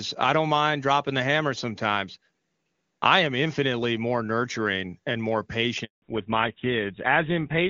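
Speech over a phone call, clear and wideband at the start in the way HD Voice sounds at a high rate. After "more nurturing and more" there is a handover gap from 5.84 to 6.02 s. The sound cuts out for 180 ms while the call switches networks and no frames arrive. From 6.02 s to the end comes a fallback to narrowband. Nothing above 4 kHz remains, so the speech turns dull and rough, which fits a switch to GSM full rate.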